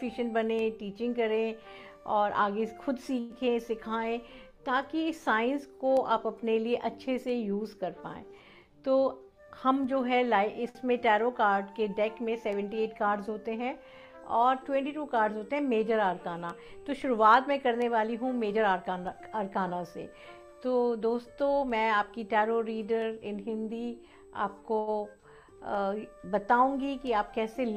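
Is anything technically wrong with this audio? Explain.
Yes, there are delivery faults of the kind a packet-based call produces.

Call audio freeze, 3.19 to 3.33 s: the sound stalls and is carried on as a fading buzz or hiss for about 106 ms, then resumes where it stopped. The likely cause is late packets draining the jitter buffer.

Jitter buffer speed-up, 9.07 to 9.85 s and 18.30 to 18.93 s: the receiver trims pitch-period slices to shrink excess buffering, removing roughly a tenth of a second and then less. The audio hurries, at 113% and 110% speed, without changing pitch.

Short stall from a late packet, 10.69 s and 24.79 s: a missing packet empties the buffer, so the last sound is stretched for 57 ms and then 79 ms, held too long with a slight buzz or dip.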